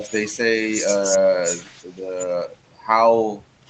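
Right at the start, from 0.00 to about 0.06 s, the speech ducks briefly by roughly 5 dB, most likely speech suppressed in double talk: the echo canceller apparently heard both sides at once, mistook the talker for loudspeaker echo, and pulled the level down. The whole effect lasts well under a tenth of a second. A packet loss or dropout would cut to silence or leave a glitch, but here the speech stays present and is only turned down.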